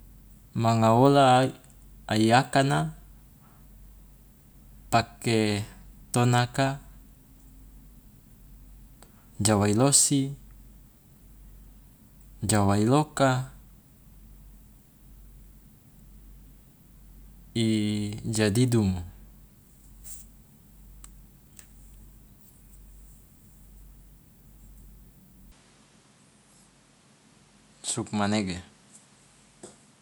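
From 25.52 s to the end, speech loses everything above 11.4 kHz and gains a new noise floor about 40 dB down, with no gap or level jump. That fresh noise floor marks a likely input switched to a poorer device, not a filter.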